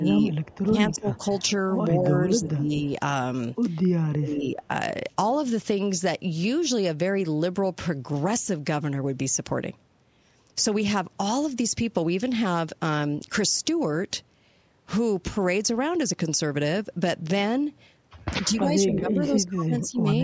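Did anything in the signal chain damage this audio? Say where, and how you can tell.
Yes. The damage sits in call processing, in the echo canceller. This is speech suppressed in double talk. The level dips at 0.0–1.2 s, 2.0–2.72 s, 4.06–4.63 s and 18.42–20.05 s. The deepest drops run from about 15 dB to about 25 dB. The likely cause is the canceller failing to tell the near talker from loudspeaker echo while both sides spoke, so it turned everything down.

There is also an echo leak from the same stage. A faint delayed copy of the speech appears at 0.33–0.58 s and 0.97–1.4 s, trailing by 220 ms at about 30 dB below the speech. A shorter scrap at 19.82–19.87 s trails by 232 ms at about 25 dB below. The delay points to loudspeaker sound reaching the far microphone. The canceller there left part of it, and that part was sent back.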